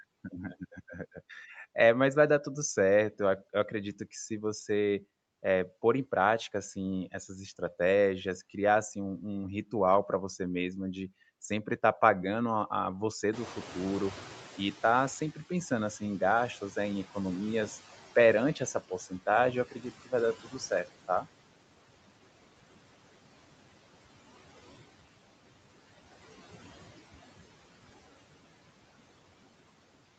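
Noise suppressor artifacts run through the whole speech clip. Steady background is pulled down by about 17 dB, so the noise sinks between words.

From 13.32 to 18.8 s comes noise suppressor catching up. Room noise jumps by about 20 dB near 13.5 s. The suppressor's estimate lags for 5.48 s, then reduces it by about 15 dB.

Speech is cut by the noise suppressor at 19.71 to 19.85 s and 20.43 to 20.87 s. Short stretches, around 100 and 150 ms, dip by up to about 10 and 16 dB, sounding swallowed.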